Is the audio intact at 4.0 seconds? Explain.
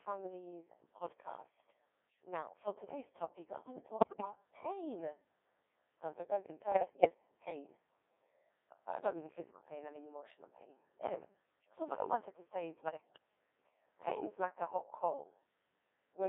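No. Bit errors on digital voice radio hit from 3.97 to 4.25 s. Around one bit in ten flips, scrambling pitch, level and voicing per frame, so the sound jumps into warbling, bleeping gibberish. Underneath, the Codec 2 vocoder is heavily damaging the sound, and it sounds like roughly a 1.6 kbit/s mode. It rebuilds the sound from sine waves, giving a robotic, buzzy tone.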